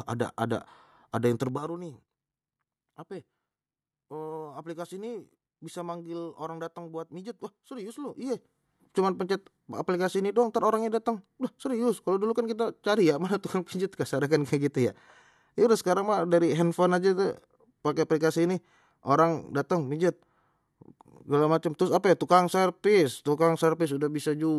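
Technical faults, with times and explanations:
1.39 to 1.77 s, zipper noise: just after "ada ada ada yang" the level drops around 15 dB in unsmoothed jumps of about 4 dB, roughly ten a second. Each jump clicks, so a quick ticking zip rides over the speech while it fades.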